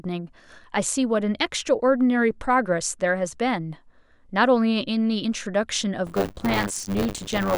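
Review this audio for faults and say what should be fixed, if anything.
Buffer tearing from 6.06 s to the end: the ring buffer's writer and reader cross every 10 ms period, splicing in about a fifth of audio from roughly 30 ms earlier. This produces a 100 Hz rattle, seen as regular waveform jumps and evenly spaced vertical spectrogram stripes. Resynchronising the read and write pointers after an overrun prevents it.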